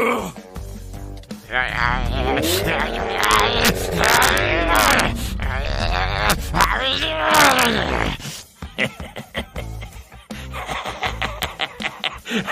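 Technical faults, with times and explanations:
3.24–3.69 s, 4.04–4.38 s, 4.76–5.0 s, 6.30–6.64 s, 7.35–7.65 s and 11.43 s, integer overflow: peaks pushed about 0 to 2 dB past full scale wrap to the opposite sign instead of limiting, giving violent cracks far harsher than clipping's flattened buzz.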